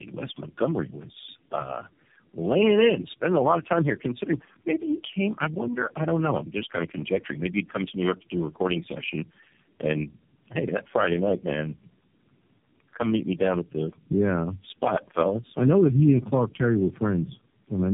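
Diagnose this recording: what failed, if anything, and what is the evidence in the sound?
The failure is at the codec stage: tandem speech coding across several network borders, present throughout the speech. Nothing is heard above 3.7 kHz, and the speech is rougher, more muffled and more warbly than a single narrowband coder would make it. That points to roughly four low-rate speech codecs in series, likely ending in AMR narrowband, each re-encoding the previous one's artefacts. One coder alone would leave band-limiting without this compounded smearing.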